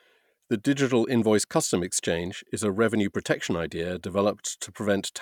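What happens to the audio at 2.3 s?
Nothing goes wrong at 2.3 s; the speech carries on intact through that moment.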